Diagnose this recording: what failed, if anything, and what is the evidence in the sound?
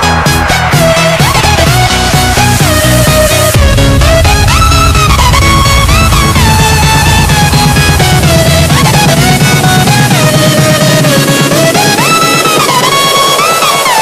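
Hard clipping runs through the whole recording. It is heard as a harsh fuzz on every loud passage. The level was driven about 8 dB past the clipping limit. Around a seventh of the samples have flat-topped peaks. Those flattened peaks add high harmonics.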